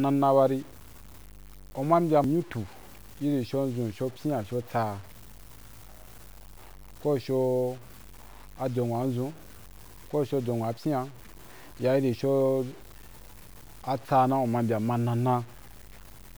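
From start to finish, the speech carries a grainy, rough distortion that rises and falls with the voice. Quiet stretches turn gritty. The softest moments sputter and drop toward silence between syllables. The error follows the signal rather than sitting as a steady hiss, and it sits roughly 25 dB below the speech. The likely cause is low bit depth without dither: truncation to a coarse scale that fits about 7 bits.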